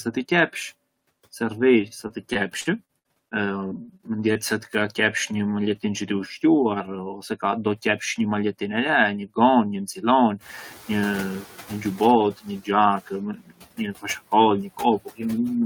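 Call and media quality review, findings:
Noise suppressor artifacts, whole clip: background pulled down about 14 dB, sinking between words and rising under them. Probable component: noise suppressor applying frame-by-frame band gains to what it classifies as steady noise.

Repeated packet loss (robotic sound), 1.81–4.37 s: choppy speech with pieces missing. Roughly a dozen short holes totalling 320 ms, the longest 59 ms, about 12% of the span. Probable component: jitter buffer/concealment extending the previous sound into each gap, around a fifth of a second rebuilt.

Noise suppressor catching up, 10.41–13.03 s: room noise steps up about 18 dB near 10.5 s, passes through under-reduced, then sinks over 2.62 s to about 9 dB of cut. Probable component: suppressor noise estimate lagging the sudden rise. The noise itself is genuine room noise, about 19 dB below speech.

Speech cut by the noise suppressor, 13.35–14.05 s: soft speech portions swallowed, dropping as much as about 19 dB, roughly 200 ms affected in total. 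Probable component: noise suppressor misclassifying low-level speech as noise.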